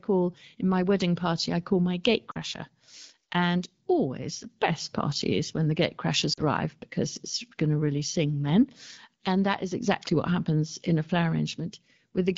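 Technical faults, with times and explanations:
2.31 to 2.38 s and 6.33 to 6.42 s, lost AMR speech frames: after "party I call my" and "party is when the", about 40 ms of speech failed its checksum. The AMR-WB decoder, running at 12.65 kbit/s, repeated the last pitch and vocal tract settings at falling gain, which drops the sound to near silence within two frames before it recovers weak or rough for a moment.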